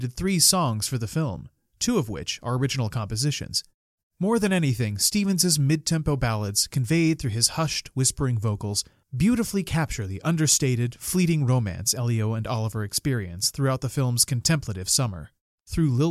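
A speech recording with a single underrun with held sample at 4.47 s. The output buffer briefly ran dry and the converter froze on its last value for 0.67 ms, which points to a missing block of about 32 samples, until fresh data arrived. On a waveform this shows as a tiny flat plateau. Well under a millisecond of live audio was skipped while the value was held.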